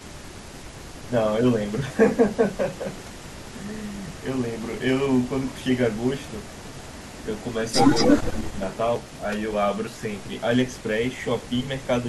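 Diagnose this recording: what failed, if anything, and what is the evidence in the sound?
A delayed copy of the speech trails it at 2.76–3.58, 3.96–4.23, 4.47–4.81, 5.12–7.56, 7.94–8.77 and 9.08–9.16 s. It sits about 25–30 dB down, lagging 227 ms, then 266 ms from 7.94 s, where it jumps to about 5 dB above the speech. This is likely an echo leak in call processing: a far-end loudspeaker's echo canceller let its microphone pickup return.

Between 8.1 and 8.58 s, while that loud echo overlaps, the main speech dips by up to about 10 dB, in pieces totalling roughly 300 ms. This is speech suppressed in double talk, likely from the echo canceller failing to separate talker from loudspeaker echo and attenuating both.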